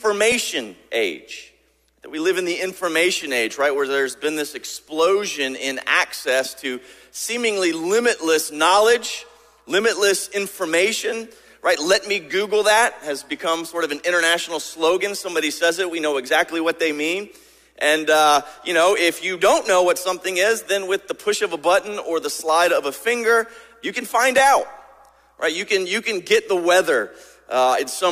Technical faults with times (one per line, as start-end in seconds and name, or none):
0.32 repeated buffer
3.22 repeated buffer
24.38 repeated buffer